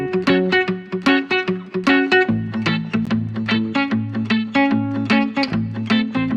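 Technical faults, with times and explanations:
3.05 s, gap between stream segments: a hard-edged hole of about 14 ms of silence where two segments' timestamps don't quite meet; nothing's actually lost.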